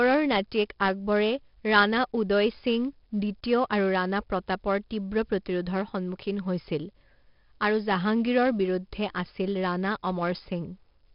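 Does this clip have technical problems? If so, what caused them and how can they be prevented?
Yes. Throughout the speech, 4-bit ADPCM compression leaves a gritty hiss riding on every loud syllable, with harsh distortion on sharp onsets where the coarse adaptive step lags behind. Unlike a steady background hiss, this noise rises and falls with the speech level. Nothing sounds above 5.3 kHz, which fits a low sample rate and a rate near 44 kbps. To prevent it, record and store in linear PCM or a modern perceptual codec at a full sample rate.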